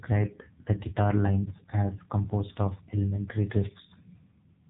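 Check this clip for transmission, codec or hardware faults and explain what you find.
The speech has passed through the AMR narrowband mobile codec, heavily, for the whole clip. This 2G/3G phone codec resamples to 8 kHz and rebuilds each 20 ms frame from a vocal-tract filter excited by a few pulses. Nothing above about 3.8 kHz survives, so sibilants are dull and the voice sounds boxed-in, buzzy and synthetic, which fits a low mode around 6.7 kbps. A spectrogram shows a hard ceiling near 3.8 kHz and smeared, blocky harmonics.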